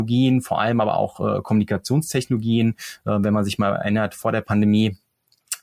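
A short speech recording with nothing technically wrong in it. No fault can be heard anywhere in the audio.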